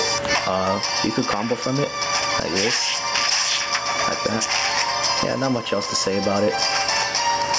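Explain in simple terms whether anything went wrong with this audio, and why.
Gain pumping runs through the whole recording. The likely cause is a microphone level set far too high, with an automatic limiter quickly pulling the volume down, squashing loud and quiet parts together.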